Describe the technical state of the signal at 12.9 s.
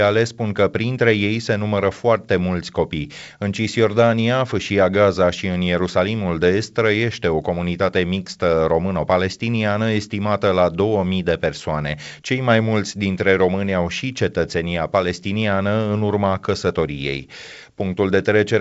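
At 12.9 s the audio is intact, carried through G.722 wideband telephone coding at 64 kbit/s with nothing above about 7.7 kHz.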